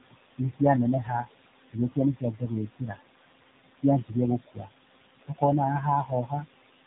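Right from the start, the whole clip runs through a noise suppressor, and you can hear it working. The room noise sits only about 10 dB below the speech, so the suppressor is pulling the background down by about 19 dB in the gaps and then letting it swell back up under the talking.

On top of that, the sound has clearly been through the AMR narrowband mobile codec, and the damage is plainly audible. Everything above 4 kHz is simply gone, so it has that boxed-in phone-line quality. The voice has a buzzy, synthetic edge, and what's left of the background swirls. That points to one of the low-rate AMR-NB modes, something like 7.4 kbps, where the codec is rebuilding the voice from a vocal-tract model with very few pulses.

Between 0.01 and 0.61 s you get speech cut by the noise suppressor. It mistakes some of the opening speech for noise and ducks it, by about 21 dB at the deepest point, across only part of that span. 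Those bits sound swallowed. It happens again, more mildly, from 6.05 to 6.32 s, where a dip of about 11 dB leaves the speech there faint and a little eaten.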